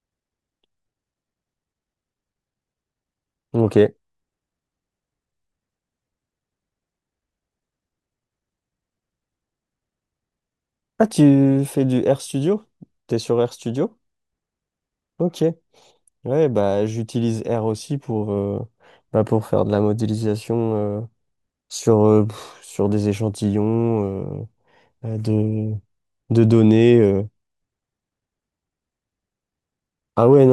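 No technical faults occur anywhere in the speech, so there is nothing to describe in time order.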